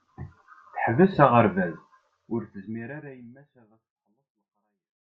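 Nothing in this speech clip sounds wrong; the level just eases down from around two seconds to the end in a smooth, deliberate fade-out with no click or hard edge.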